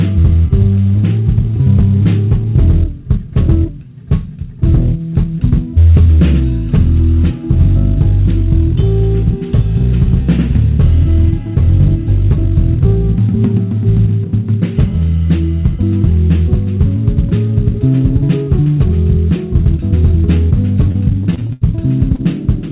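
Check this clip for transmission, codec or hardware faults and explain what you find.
Two transmission faults occur near the end, both packet-loss related, heard through a narrowband call codec with nothing above 4 kHz, consistent with G.711 mu-law.

Repeated packet loss (robotic sound), 20.92 to 21.63 s: packets kept arriving late or not at all, each hole patched by extending prior sound. The result is choppy and robotic, with gaps up to 84 ms.

Short concealed packet loss, 22.15 to 22.21 s: about 40 ms never reached the decoder, so the receiver continued the previous sound and blended back, leaving a brief smear.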